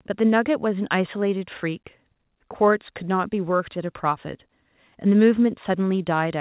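Speech over a call path, with the top end stopping at 4 kHz, which fits G.711 mu-law at 64 kbps, and no technical faults present.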